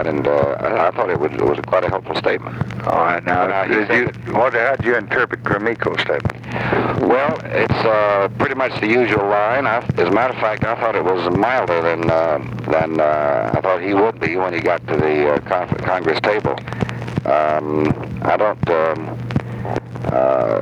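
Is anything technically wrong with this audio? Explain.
Yes. Gain pumping runs throughout the clip. The input gain is likely set far too high, so a fast limiter clamps down on each loud sound, a swing of around 15 dB. Loud and soft parts end up closer in level, leaving the sound squashed and breathing.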